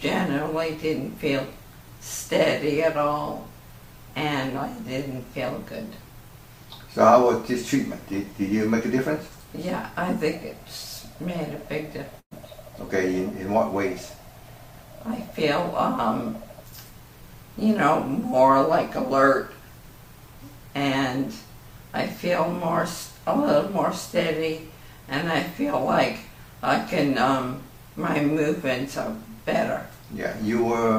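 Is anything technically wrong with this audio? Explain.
Yes, there's a burst of packet loss from 12.19 to 12.33 s. A run of audio never arrived, so the receiver stretched the last sound for about 115 ms while fading it, then dropped to silence. When playback picks up, roughly 120 ms of material is simply gone.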